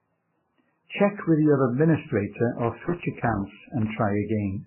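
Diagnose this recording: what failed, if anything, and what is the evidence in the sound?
Throughout the speech the sound is dull and smeared, with nothing above 3 kHz and a mix of swirly, warbling artefacts of different textures layered together. This points to the codec stage, likely transcoding between lossy codecs at very low bitrates, ending in MP3, with each pass adding its own damage.

From 2.52 s to 3.90 s, just after "with your administrator", an irregular burst of scratchy crackle breaks up the signal. This is loose connector crackle in the analogue wiring, where a worn or dirty contact repeatedly makes and breaks, chopping the audio.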